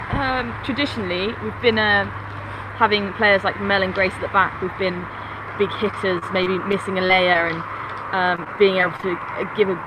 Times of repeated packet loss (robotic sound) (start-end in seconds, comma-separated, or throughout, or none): 5.91-7.52, 8.36-9.04